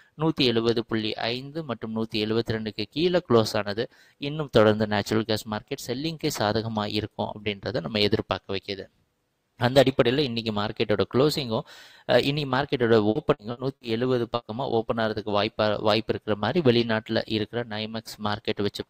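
Three times the sound sinks in level: from 3.9 to 4.22 s, from 7.36 to 7.65 s, and from 8.44 to 9.05 s. Steady and fading parts are pulled down by up to about 12 dB (about 11 dB in the middle event), and trailing decays are clipped short, while abrupt onsets survive better. Each dip affects a few hundred milliseconds or less. This is sound cut by the noise suppressor: it misjudged genuine content as noise and attenuated it harder than its surroundings.

Between 13.09 and 13.84 s the audio turns choppy, with pieces missing. This is repeated packet loss. Four separate holes fall in that stretch, the longest 60 ms, adding up to 240 ms of audio that never arrived. Each hole was patched by extending the preceding sound, so roughly a third of the span is stand-in material rather than the real signal.

At 14.35 to 14.44 s there is one further, isolated break: the sound briefly freezes into a held buzz or hiss that fades, then picks up again a little later with content skipped. 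This is a burst of packet loss. About 60 ms of consecutive audio was lost or arrived too late to play, and the receiver filled the gap by continuing the last sound while turning it down.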